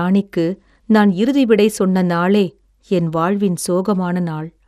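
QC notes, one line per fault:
Throughout, MP2 compression (likely): the speech is dull, with nothing above 14.4 kHz, and carries a plainly audible gurgling, granular edge. Upper sub-bands drop in and out as bits run short, and the rest are coarsely quantised, which fits a rate around 80 kbps.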